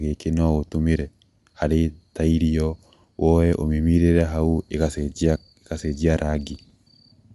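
Throughout, likely Bluetooth LC3 compression with 10 ms frames, fitting about 48 kbps, cuts everything above 11.5 kHz and leaves plainly audible coding damage on the speech.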